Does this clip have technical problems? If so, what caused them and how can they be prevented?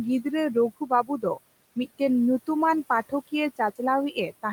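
Yes. Noise suppressor artifacts run through the whole clip: the suppressor pulls the room noise, which sits about 20 dB below the speech, down by about 18 dB between phrases and releases it under them, so the background pumps. Prevent it by lowering the suppression depth or lengthening its smoothing.

Speech cut by the noise suppressor occurs from 0.77 to 1.38 s, where roughly a third of a second of quiet speech drops by up to about 17 dB, and from 4.11 to 4.45 s, where about a tenth of a second drops by up to about 10 dB. Both sound swallowed. Prevent it with a less aggressive gate threshold that protects low-level speech.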